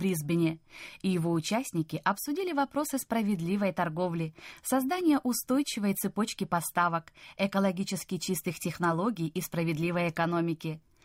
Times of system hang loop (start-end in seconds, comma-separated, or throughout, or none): none